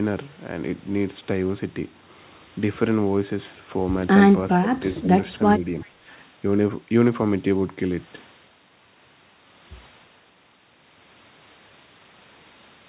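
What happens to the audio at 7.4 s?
Nothing goes wrong at 7.4 s: the speech carries straight through intact, with only the narrowband telephone character of the call path, nothing above about 4 kHz, which is consistent with a G.711 mu-law codec at 64 kbps.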